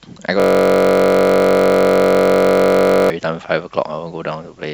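A system hang loop affects this speech clip from 0.40 to 3.10 s: the driver froze while the hardware kept replaying one 21.33 ms buffer, which fits a 1024-sample buffer, 127 times over, so the speech stops and becomes a steady buzz at about 46.9 Hz.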